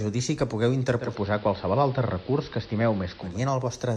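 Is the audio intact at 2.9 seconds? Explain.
No. At 2.9 s the speech is dull, with a soft hiss about 25 dB down. This is digital radio blending to analogue: from 0.97 to 3.40 s the receiver cross-faded over 0.2 s to the AM broadcast, shifting level by about 1 dB.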